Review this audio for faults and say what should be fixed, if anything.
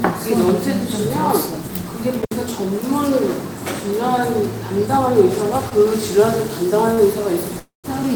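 An intermittent contact between 2.22 and 2.35 s opens the line for about 66 ms. The sound drops out with crackle at both edges and faint hiss in the gap, as a loose plug or cable briefly loses connection. Reseat or replace the connector and cable.

Two short stalls from a late packet, at 5.69 to 5.73 s and 6.95 to 6.99 s, hold the last sound for 19 ms and 26 ms. Nothing is lost; playback resumes where it stopped. A slightly deeper jitter buffer would absorb these delays.

A call audio freeze runs from 7.59 to 7.86 s. The last sound is extended as a fading buzz or hiss over 245 ms, including about 140 ms of silence, before the audio resumes with nothing missing. Packets held up in transit likely emptied the jitter buffer. Check network congestion or route stability on that link.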